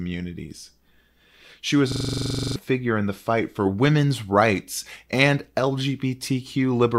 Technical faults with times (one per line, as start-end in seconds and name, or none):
1.92-2.56 system hang loop